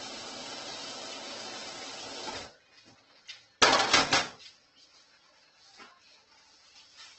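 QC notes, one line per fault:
Throughout: Opus compression. The sound is heavily grainy and rough, with tones turned noisy and nothing above 8.2 kHz. This is likely Opus in its music mode filling bit-starved bands with folded or noise content, which fits a rate near 12 kbps.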